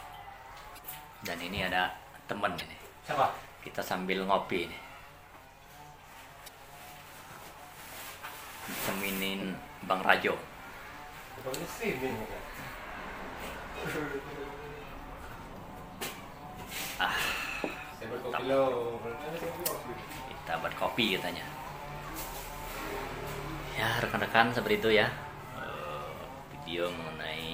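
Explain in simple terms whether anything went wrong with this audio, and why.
Three short glitches come from damaged data in a compressed stream, at 0.75 to 0.79 s, 2.58 to 2.62 s and 6.44 to 6.49 s. Some stored data there was wrong. The player lost its place briefly, causing a quick chirp or blip.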